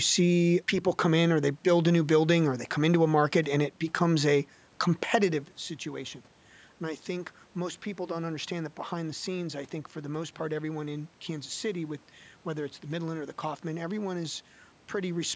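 No technical faults are present in the speech. The call microphone processing trims the deepest bass and leaves nothing above 8 kHz, room noise sits in the background, and around 5 s the talker moved, so the level at the microphone shifts.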